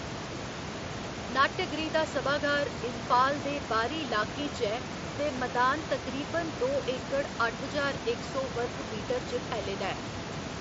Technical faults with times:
none

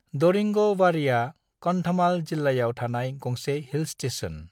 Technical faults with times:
none

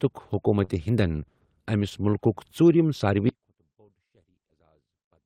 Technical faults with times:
0.64-0.70 short concealed packet loss
1.90 short concealed packet loss
3.29-5.25 audio dropout to a faint residue

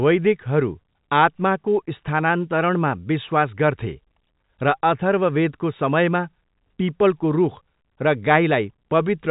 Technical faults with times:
none

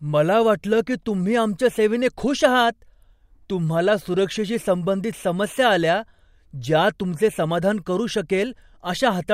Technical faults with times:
none

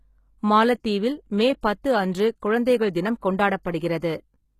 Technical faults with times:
0.00-4.59 HE-AAC compression

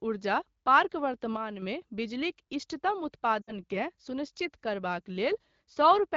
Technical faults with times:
1.37-1.62 sudden gain jump
3.41-3.52 lost AMR speech frames

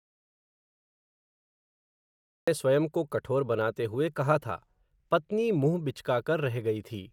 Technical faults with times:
0.00-2.48 audio dropout to silence

